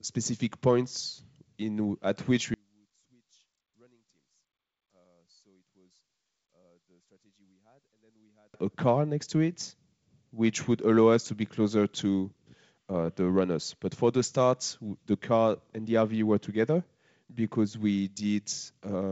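After "points in at which", from 2.54 to 8.54 s the speech sinks by about 38 dB to a faint residue, likely one channel inverted. Unlike a dropout, a faint trace remains until "a car next to".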